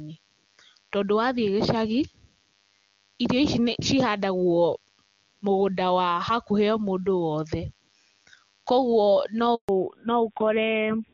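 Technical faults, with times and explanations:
Throughout: DECT cordless phone buzz. A thin, steady buzz at 100 Hz, rich in harmonics, sits roughly 40 dB below the speech. A nearby DECT handset or base transmits a burst every 10 ms, and the audio circuitry rectifies each burst into this tone.
9.55 to 9.69 s: handover gap. The speech fades within a few tens of milliseconds and then drops to silence for 140 ms. The call was switching networks, no speech frames arrived during the transfer, and that stretch of audio is lost.
9.69 s to the end: fallback to narrowband. Before this point, clean wideband HD Voice at the top AMR-WB rate carries the call. From here nothing above 4 kHz remains, and the voice turns dull and rough, which fits a drop to narrowband AMR at around 7.4 kbit/s.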